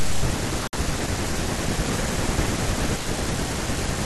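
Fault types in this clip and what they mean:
Bluetooth stall: At 0.67 s the speech cuts to dead silence for 57 ms, then resumes at 0.73 s. The cause is likely a wireless link stall, where delayed packets let the headphone buffer run empty and playback paused until retransmissions arrived.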